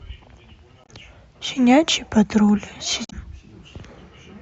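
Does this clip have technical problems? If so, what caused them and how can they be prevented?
Yes. Damaged data in a compressed stream at 0.82–0.89 s and 3.05–3.13 s: corrupted frames make the decoder lose sync and hunt for the next header, giving brief glitches in the speech. Verified transfers with checksums and error-protected streaming prevent this.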